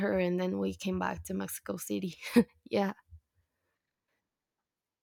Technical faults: none

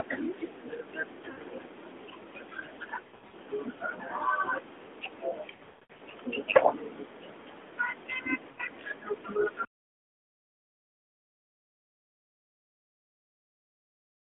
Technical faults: lost AMR speech frames

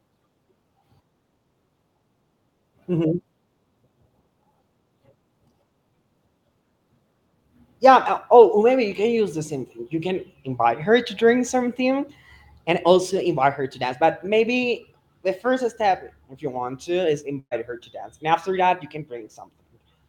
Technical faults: burst of packet loss

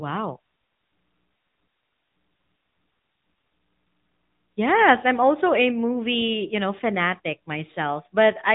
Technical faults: AMR narrowband mobile codec

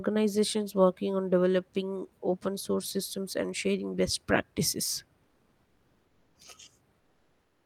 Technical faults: comfort noise in place of the background

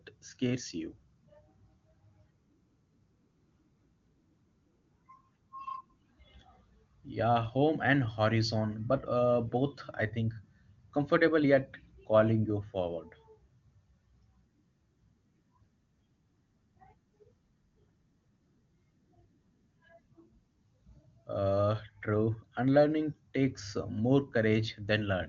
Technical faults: none

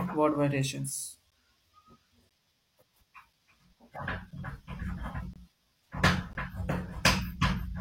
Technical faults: gap between stream segments

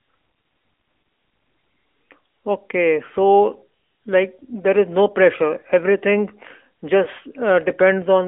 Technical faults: AMR narrowband mobile codec; lost AMR speech frames

